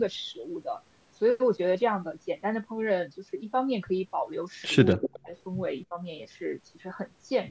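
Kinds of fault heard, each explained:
Echo leak: from 4.88 to 5.08 s a faint copy of the speech returns about 250 ms late, at roughly 15 dB down, likely an echo canceller letting loudspeaker pickup through.
Speech suppressed in double talk: at 4.98 to 5.33 s the speech drops deeply, around 40 dB, and at 5.9 s dips about 10 dB, likely suppression while both sides talk.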